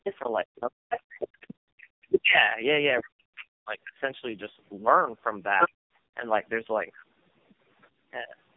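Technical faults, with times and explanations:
Throughout, tandem speech coding: the speech went through three separate speech coders in a row, with A-law decode and re-encode between them, ending in AMR-NB. Each pass degrades the previous one's output, so it's rough, warbly and muffled, with nothing above 3.6 kHz.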